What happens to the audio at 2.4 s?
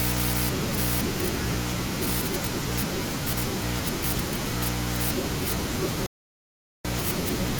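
Nothing goes wrong at 2.4 s; the speech there plays through intact, with no dropout, click, distortion or other fault.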